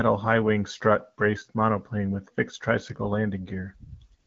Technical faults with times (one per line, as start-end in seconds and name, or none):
4.19-4.27 AMR comfort noise